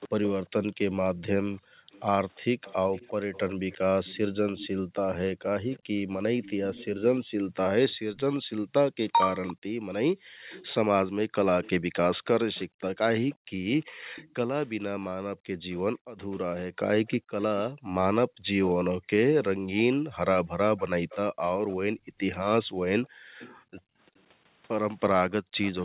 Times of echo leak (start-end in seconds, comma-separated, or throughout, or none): 0.00-0.27, 1.92-18.66, 20.77-25.84